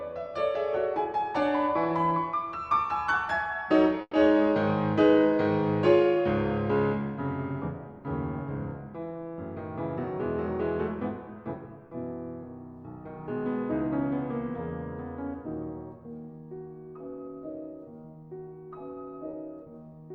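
A burst of packet loss hits the audio at 4.01 to 4.15 s. About 120 ms of the preceding sound is stretched out and faded, then roughly 40 ms of silence follows before playback resumes with about 120 ms skipped. The audible fade into a gap sets it apart from a brief smear. At 19.31 to 19.35 s, a short concealed packet loss leaves only a quick smear or wobble, with about 20 ms synthesised from the last sound and blended straight back, so there is no fade and no silence.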